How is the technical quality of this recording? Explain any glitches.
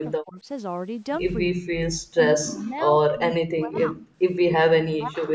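The recording has clear echo-canceller damage: the talker is repeatedly pushed down while the far end is speaking, and the room sound briefly drops out once.

Speech suppressed in double talk happens at 0.0–0.46 s, 1.51–1.71 s, 2.33–4.1 s and 4.47 s to the end. The likely cause is both sides speaking at once, so the canceller could not tell the near talker from loudspeaker echo and attenuated everything. The voice sinks by roughly 20 dB in the first and last stretches and by as much as 40 dB in the middle two. The longest stretch is 2.33–4.1 s.

Background gated by the echo canceller occurs at 1.99–2.06 s. While the loudspeaker was active, the canceller clamped the microphone hard, cutting the room tone by about 30 dB. For roughly 70 ms the ambience vanishes into near-silence, then comes back when the canceller releases.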